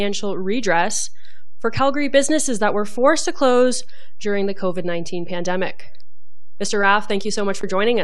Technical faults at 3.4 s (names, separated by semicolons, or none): DC offset